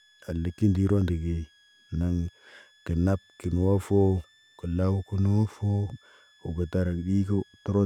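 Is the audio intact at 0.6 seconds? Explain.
No. At 0.6 s, as throughout the whole clip, a switching supply whistle sits under the speech: a thin high tone wandering between about 1.66 and 1.76 kHz, faint at roughly 35 dB below the signal. It comes from a switching power supply cycling in an audible burst mode or beating against another supply. Unlike mains hum, it is high rather than low, and its pitch drifts instead of holding steady.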